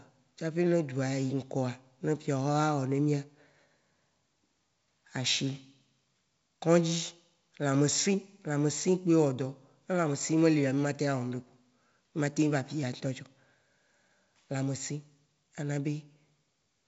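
No technical faults are audible.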